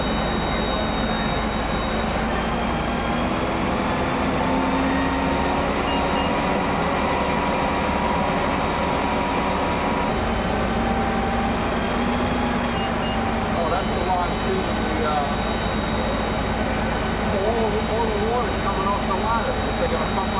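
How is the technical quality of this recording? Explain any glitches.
No glitches can be heard anywhere in the recording. It has passed through a call codec, and the band stops at 4 kHz, which fits narrowband telephone coding such as G.711 mu-law.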